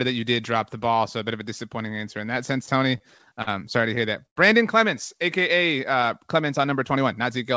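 From 2.98 to 3.49 s the speech shows repeated stalls (stutter): four brief hangs where the jitter buffer ran dry because packets arrived late, and the receiver stretched the last sound to cover about 87 ms in all, none longer than 45 ms. A second burst follows from 3.95 to 4.38 s, again four stalls but heavier, 125 ms concealed, with one 102 ms hold that fades as it is drawn out. Nearly a third of that span is filler, so the speech drags and catches, though nothing is actually lost.

From 6.96 to 7.55 s a jitter buffer speed-up takes over. The buffer had built up more audio than it targets, so the receiver trimmed short pitch-period slices, roughly 40 ms in total, to catch up. Speech runs at about 105% of normal rate with pitch unchanged and sounds slightly rushed. Throughout, the call path's codec leaves nothing above 8 kHz, consistent with G.722 at 64 kbps.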